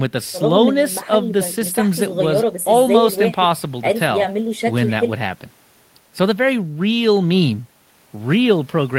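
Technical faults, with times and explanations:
No technical faults are audible anywhere in this speech recording.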